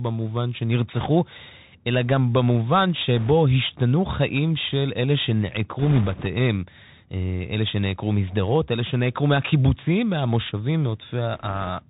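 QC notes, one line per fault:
throughout, Bluetooth CVSD headset codec: nothing above 4 kHz, scratchy s sounds and a granular hiss, as one-bit up/down steps lag loud high sounds; fits 64 kbps CVSD.
0.93–1.06 s, 3.17–3.31 s, 5.79–6.26 s, 11.34–11.70 s, bit errors on a Bluetooth voice link: rushing crackle, heaviest in the third burst at around 4 percent errors and lightest in the last. Each flipped bit shifts the waveform only one adaptive step that grows with speech level and dies away fast, so there are no sharp clicks.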